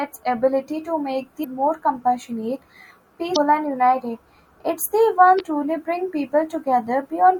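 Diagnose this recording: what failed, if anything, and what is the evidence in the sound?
Damaged data in a compressed stream, at the codec stage. Short glitches break the speech at 1.41–1.45 s, 3.33–3.37 s and 5.37–5.41 s, each about 40 ms long. Corrupt frames make the decoder misread and resync. A spectrogram shows brief broadband vertical smears, and the waveform shows abrupt discontinuities.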